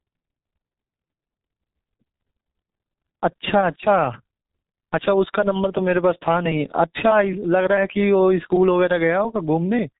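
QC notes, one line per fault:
Throughout: G.723.1 codec. The speech is muffled and hoarse, with blurred consonants and nothing above 4 kHz, so sibilants and plosive bursts lose their edge. The damage is heavy, which fits a very low rate of about 6.3 kbit/s. The codec models the voice in 30 ms frames and updates that model slowly, so quick articulation smears across frame boundaries and the excitation takes on a rough, hoarse texture.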